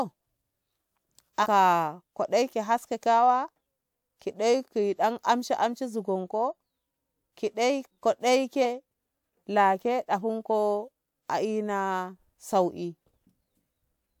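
Compressed frames skipped at 1.42 to 1.46 s and again at 8.62 to 8.65 s, just after "ki daiko". Each time the decoder played nothing for whole missing or rejected frames, so the speech leaps forward: about a tenth of a second the first time, about 150 ms the second, which points to two and then three frames of about 46 ms each.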